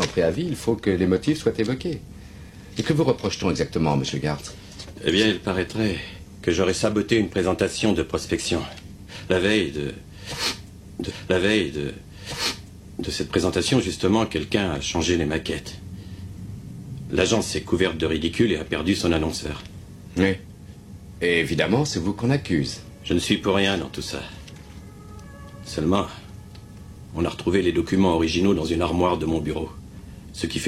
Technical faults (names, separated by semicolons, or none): stream segment repeated